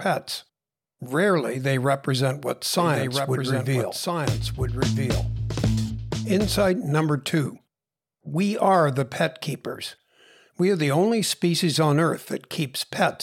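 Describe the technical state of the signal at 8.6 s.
At 8.6 s the signal is intact, with no dropout, distortion, glitch or other technical fault to be heard.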